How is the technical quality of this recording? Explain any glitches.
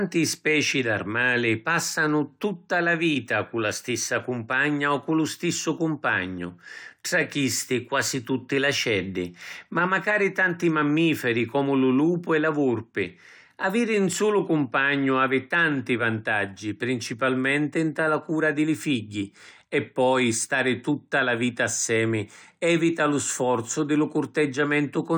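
No technical glitches can be heard anywhere in the recording.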